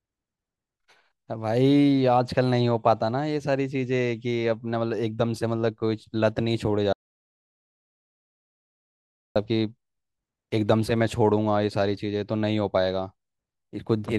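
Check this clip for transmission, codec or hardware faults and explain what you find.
One fault is present. From 6.93 to 9.36 s, the speech cuts to complete silence for 2.43 s. This is an audio dropout to silence, likely caused by lost input while recording continued.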